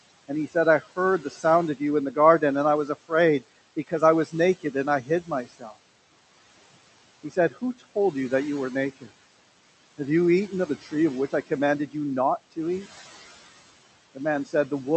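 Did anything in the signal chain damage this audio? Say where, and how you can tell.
Yes. Throughout the clip, the room noise, about 17 dB below the speech, sinks by about 17 dB between phrases and swells back under them. These are noise suppressor artifacts from the call processing stage, which turns down noise-dominated bands frame by frame.

Quiet stretches of the speech sound swallowed at 0.28–1.44 s, 3.76–5.73 s, 7.23–7.96 s and 14.15–14.54 s, dipping by up to about 16 dB. This is speech cut by the noise suppressor, which mistook soft speech for background noise.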